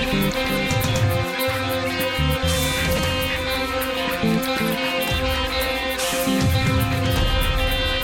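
Nothing in this music clip points to a technical fault in the signal.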